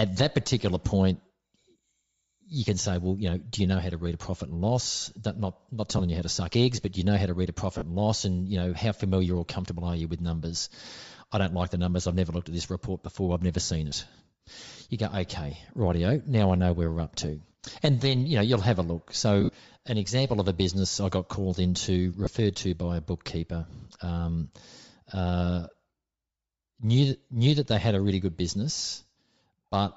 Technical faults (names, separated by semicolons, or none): Bluetooth LC3 compression; lost LE Audio frames